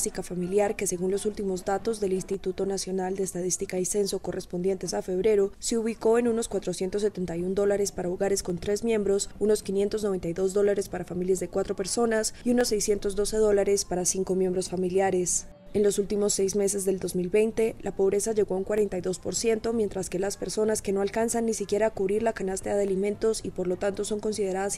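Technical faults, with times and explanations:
0.29–22.88 s, clock drift buffer slips: about ten brief clicks recur every 2.05 s while the sound plays. Each is a tiny jump where a small block of samples, around fifteen, is skipped or repeated. The likely cause is two devices on separate clocks that disagree by something like 150 ppm, so the buffer between them slowly creeps until it slips. The strict, even spacing sets this apart from packet-loss dropouts, which land irregularly and leave audible gaps.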